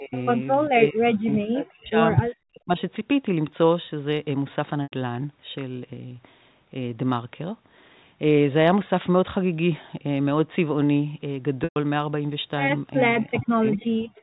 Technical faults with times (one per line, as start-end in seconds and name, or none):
0.00-0.14 speech suppressed in double talk
0.15-0.22 echo leak
0.69-1.98 speech suppressed in double talk
1.30-1.35 echo leak
2.51-2.78 speech suppressed in double talk
4.84-4.92 packet loss with pitch repetition
11.64-11.76 packet loss with pitch repetition
13.20-13.82 speech suppressed in double talk
13.71-13.86 echo leak
14.10-14.23 background gated by the echo canceller